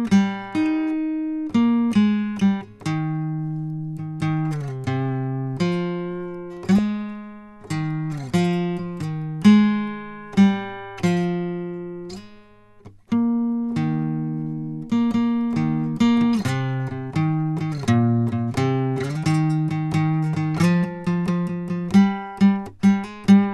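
At 6.78 s the music gets a short squeaky blip, a corrupt frame decoded. Sounds like one compressed frame had flipped bits and the decoder played it anyway, so misread gains threw energy at the wrong frequencies, peaking around -10 dBFS.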